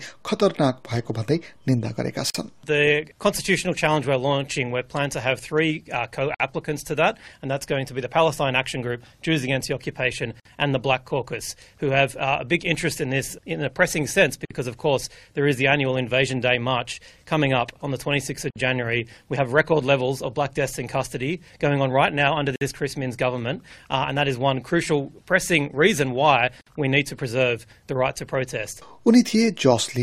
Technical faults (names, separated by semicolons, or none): gap at a join of encoded pieces